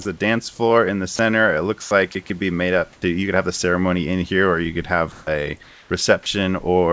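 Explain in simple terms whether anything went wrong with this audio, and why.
Sound dropped by the voice detector happens at 0.02–0.05 s, 1.16–1.19 s (right after "dance floor in the"), 1.82–1.91 s and 6.23–6.26 s. In each spot, a brief slice of speech gives way to a flat hiss. The likely cause is the sending side's voice detector mistaking that bit of speech for background, so it stopped sending and the receiver filled the gap with artificial noise.

Comfort noise in place of the background appears at 2.93–3.02 s (between "could be made up" and "you could have the"), at 5.12–5.27 s (after "here or you could") and at 5.63–5.90 s. In these pauses the real room sound is swapped for a smooth, featureless hiss. It is clearly quieter in the first pause, slightly louder in the second and about the same in the third. This is likely because the sender stops transmitting when it hears no talking.

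Onset clipped by the voice detector occurs at 2.99–3.02 s, where "you could have the" begins abruptly with its soft start missing. The likely reason is that the detector was slow to notice speech resuming, so those first moments were never sent and hiss played instead.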